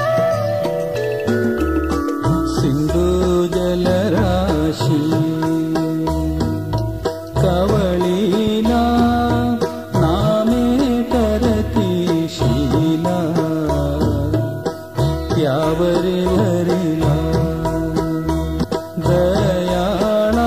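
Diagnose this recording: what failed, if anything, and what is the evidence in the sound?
The failure is in the codec stage: damaged data in a compressed stream. Brief glitches break in at 16.35 to 16.37 s and 18.62 to 18.65 s. Corrupted bytes made the decoder misread those frames and lose sync. It then resynchronised on the next valid frame header.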